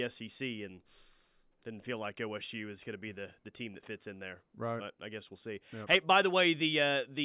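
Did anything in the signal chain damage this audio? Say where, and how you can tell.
No, nothing in the signal chain damaged this speech.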